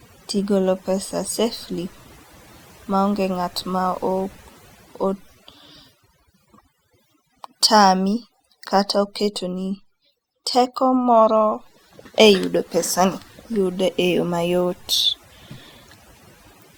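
From the start and throughout, overdone noise removal has been applied to this speech. The background drops, broken by twinkling, watery specks where isolated frequency bands briefly survive, and quieter components of the voice were pulled down along with the noise. Unlike plain low-pass filtering or a low bitrate, the dullness is not fixed. It flickers band by band and follows the level of the voice.

Starting at about 0.39 s and running to 16.68 s, faint clock slip clicks recur roughly every 0.4 s, around fifty in all. Each is a single-sample tick, likely caused by two devices on unsynchronised clocks, with one dropping or repeating a sample whenever their drift adds up to a whole sample. The spacing fits a clock error on the order of 50 ppm. These ticks are metronome-regular and come only while the voice is sounding, which sets them apart from random dropouts or buffer underruns.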